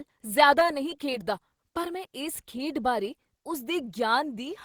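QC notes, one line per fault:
0.59–1.14 s, repeated packet loss (robotic sound): six short dropouts (longest 14 ms) where the last sound is repeated to fill about 60 ms and 40 ms goes missing. The speech turns choppy, with pieces missing. The spectrogram shows smeared, repeated frames broken by brief vertical gaps.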